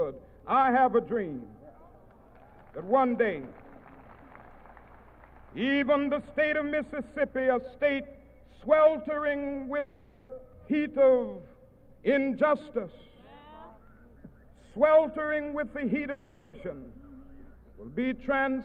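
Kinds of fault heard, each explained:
Long network dropout: at 9.79 s and 16.11 s the sound turns into a fading buzz for 0.5 s and 0.42 s, then resumes with that stretch lost, likely because packets stopped arriving. The spectrogram shows smeared, decaying bands, and the waveform shows repetitive decaying texture rather than flat silence.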